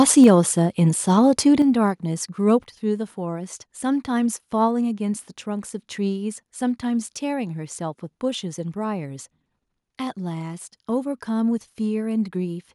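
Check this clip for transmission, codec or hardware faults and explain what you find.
Two hardware-side faults show up in the opening seconds of this speech clip: a burst of microphone overload, followed by the microphone volume being stepped down three times.

Microphone overload, 0.0 to 0.3 s. The peaks exceed full scale by about 3 dB, so their tops are flattened, affecting a small fraction of samples, around one or two percent. The likely cause is an input volume set too high, driving the converter past its limit. The squared-off peaks add a harsh, crackly edge to the loudest syllables at the very start.

Microphone volume stepped down, at 0.24, 1.62 and 2.64 s. Each time, the level of the speech and the background falls abruptly, by about 4 dB, then about 6 dB, then about 4 dB. The first drop lands just as the distorted peaks end, pointing to call software that detected clipping and cut the device's input gain in single steps. 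You hear these as sudden staircase drops in loudness rather than a smooth fade.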